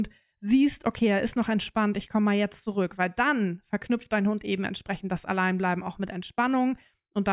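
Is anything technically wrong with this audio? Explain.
No, nothing technically wrong turns up anywhere in this speech recording.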